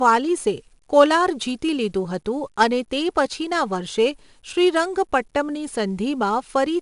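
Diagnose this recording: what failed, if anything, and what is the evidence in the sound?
The failure is at the codec stage: the speech has been through 4-bit ADPCM compression, and it's plainly audible from start to finish. Every loud syllable carries a gritty hiss riding right on its level, because each sample is coded as a coarse 4-bit step off a prediction, so the error scales with the signal. Nothing comes through above about 10.6 kHz, which fits a 22 kHz sample rate and roughly 88 kbps.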